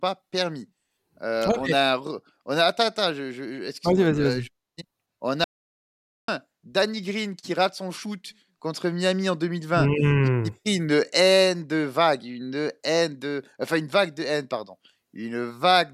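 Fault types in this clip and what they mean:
Audio dropout to silence: from 5.44 to 6.28 s the speech stops abruptly mid-flow and resumes just as suddenly, leaving about 0.84 s of silence with no room tone underneath. That empty floor sets it apart from a pause in speaking, where some background hiss normally remains. The cause is likely a momentary loss of the input, with silence written in its place, and whatever was said during the gap is lost.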